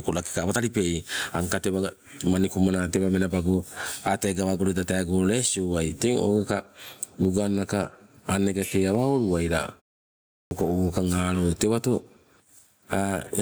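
Gain pumping runs through the whole speech clip. The level swings by roughly 15 dB. The likely cause is an input gain set far too high, with a fast limiter or compressor pulling it back on every peak. That leaves loud and quiet passages squashed close together.

At 10.42 s comes a clipped start after a pause. After about 0.69 s of silence, the next phrase bursts in without its opening. Roughly 91 ms of onset is missing, ending at 10.51 s, because the output device had gone idle and needed time to wake and lock again. This differs from a pumping duck, which lowers the sound without removing it. Here the first sounds are gone entirely, and the word begins abruptly out of silence.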